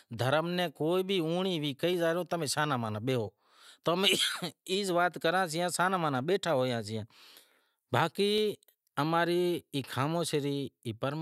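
Speech, with five single sharp clicks at 1.94, 4.05, 6.99, 8.38 and 9.82 s. Each one is likely dropped samples: a fraction of a millisecond goes missing, so the waveform jumps straight to a later value and leaves a thin vertical line across the spectrum.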